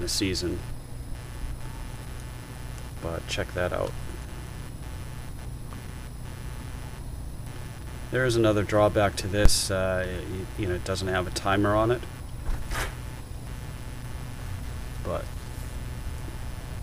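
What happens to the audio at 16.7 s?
At 16.7 s you're still hearing computer activity noise, present the whole way through: a buzzy chatter around 150 pulses per second, roughly 20 dB under the sound, as processor load shifts the shared ground.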